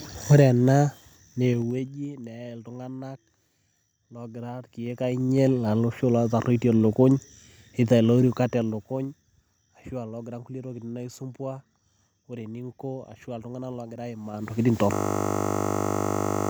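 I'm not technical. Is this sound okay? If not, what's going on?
No. Zipper noise at 1.45 to 2.05, 4.69 to 5.46, 8.19 to 9.30 and 14.25 to 14.59 seconds: the volume moves in small jumps, roughly ten a second, and each jump ticks.

System hang loop from 14.93 seconds to the end: the system froze and replayed the same 20-millisecond scrap of speech over and over, making a steady buzz of 50 repeats per second.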